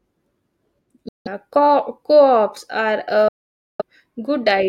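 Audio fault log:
1.09–1.28 s and 3.28–3.82 s, Bluetooth dropout: the speech cuts abruptly to silence for about 0.19 s, then about 0.51 s, and resumes further along as though it had played on, likely from packets reaching the headphones too late. Nothing repeats or stretches to fill the gaps, unlike packet-loss concealment.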